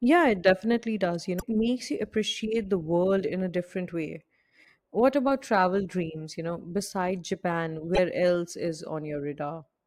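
At 1.37 s and again at 7.93 s, each lasting about 56 ms, the speech breaks into a short glitch caused by damaged data in the compressed stream. Corrupted frames are misread by the decoder, which loses sync until it finds the next valid frame header.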